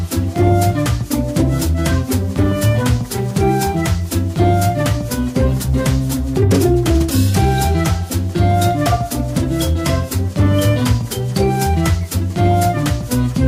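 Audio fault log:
Nothing stood out on listening to this clip.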